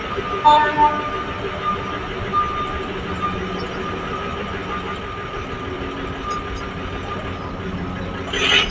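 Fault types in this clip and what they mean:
Noise suppressor applied to music or sounds: A suppressor tuned for speech stays active through the whole clip and treats sustained, steady parts of the sound as noise to be removed. Onsets come through largely intact, but held portions and decaying tails are pulled down, with the level swinging by about 5 dB as the gain reacts. The result is an audible pumping and thinning of the sound, on top of a band that already stops near 8 kHz.
Doubled audio track: A second full-band copy of the same sound runs behind the original by roughly 150 ms, at about 5 dB below it, giving a flat, slap-like repeat with no reverberant colouring. It is already present when the clip begins and cuts off abruptly at 5.0 s, after which the sound is single. The fixed offset most likely means the audio was picked up twice, once through a slower path.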